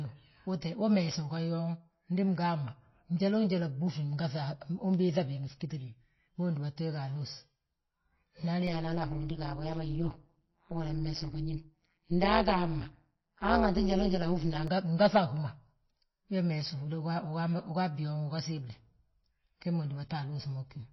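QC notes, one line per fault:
Throughout, MP3 compression, likely: the speech turns watery and swirly as weak spectral lines flicker between frames, which fits a bitrate near 24 kbps. A plain lowpass would dull the sound without that shifting, metallic churn.
8.67 to 14.68 s, overlap-add ripple: frames rejoined with mismatched overlap make the level pump at around 150 Hz, about 60 dB deep, giving a harsh robotic buzz over the speech. Its steady, frame-locked rate separates it from the irregular swirl of the codec damage.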